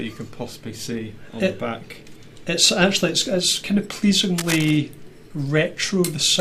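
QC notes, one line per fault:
4.38–4.77 s, cable scratch noise: a burst of dense, uneven scratching around 10 dB below the signal, likely a worn cable or connector being moved.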